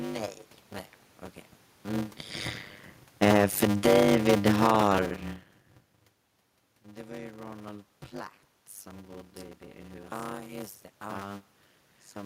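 From start to finish the speech carries a block size mismatch (padded): each block the upstream stage delivers is shorter than the block the next stage reads, and the shortfall is filled with silence. That puts a brief gap into every block, heard as a steady 100 Hz buzz, and stretches the speech to run about 0.53 times its normal speed with the pitch roughly unchanged. The figures fit 256-sample blocks padded out to 480. A waveform shows regular flat notches; a spectrogram shows vertical stripes every 10 ms and a comb of harmonics at 100 Hz.

Between 3.08 and 5.29 s, automatic gain falling takes hold. The gain control judged the input too loud, or its background noise too strong, and pulled its gain down gradually, by about 11 dB in total, so the speech begins loud and then sinks, with the room noise underneath sinking by the same amount. This is unlike the level shifts near 2 s and 5.5 s, where only the talker's distance from the microphone changes. 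The waveform envelope tapers smoothly over those two seconds, and the spectrogram dims evenly across all frequencies, background included.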